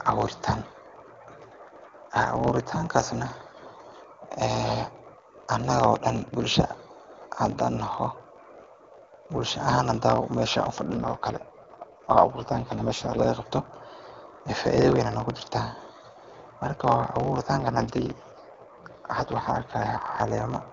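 Speech running through a block size mismatch (truncated) for the whole clip: a steady 50 Hz buzz and delivery about 1.07 times fast, consistent with 1024-sample blocks being cut short, yet timbre stays normal, unlike a resampling error. Two AMR rate drops, from 23.85 to 8.85 kbit/s at 10.94 to 13.20 s and 17.60 to 20.02 s, make the speech rougher and more synthetic. The bandwidth holds and nothing goes silent, which rules out a band switch or dropout. Outside those spans the AMR-WB coding at 23.85 kbit/s sounds clear.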